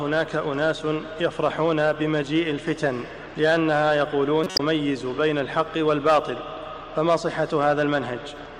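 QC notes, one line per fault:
4.43–4.60 s, corrupt frame decoded: a short run of compressed frames arrived with damaged bits, and the decoder rendered them anyway instead of concealing them. Misread gains and spectral codes place energy at frequencies the original never had. The result is a harsh burst of chirpy noise lasting about 160 ms, which fits roughly five consecutive bad frames. It peaks loud, around about −5 dBFS.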